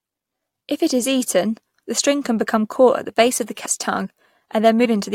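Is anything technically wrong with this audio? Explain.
Yes. The speech has compressed frames skipped at 3.65 s and 4.84 s. Whole blocks of encoded audio never reached playback, either lost from the file or rejected by the decoder as damaged, so the stream jumps forward. The first jump drops roughly 100 ms and the second about 70 ms, consistent with several 21.3 ms frames each. At each join the speech is abruptly a little further along.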